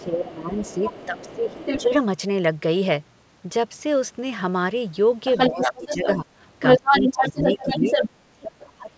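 From 0 to 1.82 s there's the other side's voice leaking through, sitting a bit under the talker. It's likely loudspeaker echo the canceller didn't fully remove. Up to 1.94 s the talker's speech also dips by about 15 dB, likely suppressed in double talk as the canceller turns down both voices together.

It happens again from 5.25 to 6.16 s, with the leak roughly level with the talker. The speech ducks about 10 dB from 5.5 to 6.28 s.

From 6.61 to 8.1 s the leaked voice gets louder than the talker. From 6.78 s to the end, the speech is pushed down by as much as about 30 dB, nearly cutting out.

All of it sits under 8 kHz, consistent with the G.722 call path.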